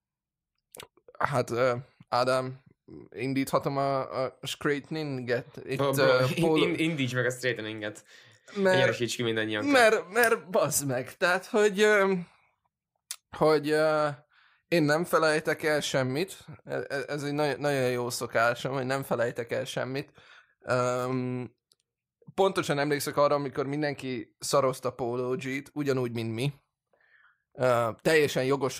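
No technical faults occur at any point, so there is nothing to describe in time order.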